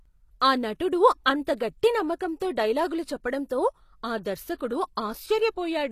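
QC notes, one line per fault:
Throughout: HE-AAC compression, plainly audible on this speech. The treble reaches high but is rebuilt rather than coded, copied up from lower bands under a coarse envelope, so s sounds turn gritty and lispy with a metallic edge. This likely comes from a low bitrate around 24 kbps.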